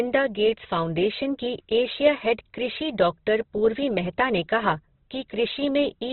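Right from the start the speech has that Opus compression grain: rough, noisy texture on the voice and nothing above about 4.1 kHz, so it's boxed into narrowband. It's likely heavy low-rate encoding in music mode, which fits a bitrate around 12 kbps.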